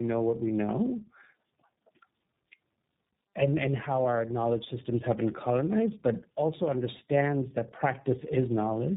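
Tandem speech coding runs through the whole clip: the speech passed through two low-rate speech codecs in a row, each decoding and re-encoding what the previous one had already degraded. The character points to something like G.729A followed by iLBC, with a plain G.711 link between them. Nothing reaches above about 3.8 kHz, so the speech sounds muffled, and the stacked coding adds a rough, warbly texture that neither codec would produce alone.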